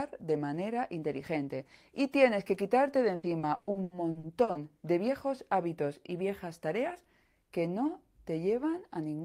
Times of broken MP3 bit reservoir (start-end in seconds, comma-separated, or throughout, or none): none